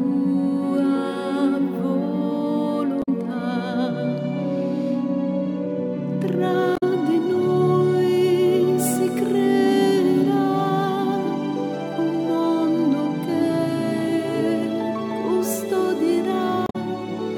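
Damaged data in a compressed stream at 2.99–3.09 s, 6.75–6.83 s and 16.64–16.76 s: corrupted frames make the decoder lose sync, producing brief glitches.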